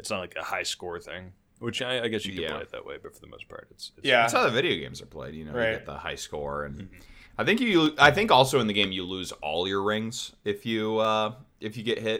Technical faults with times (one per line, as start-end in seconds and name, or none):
2.37 dropped samples
7.86 dropped samples
9.09 dropped samples
11.05 dropped samples